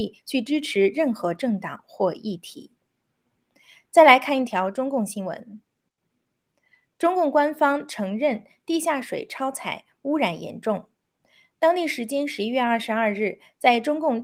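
No technical faults occur at any point in the recording, so there are none to describe in time order.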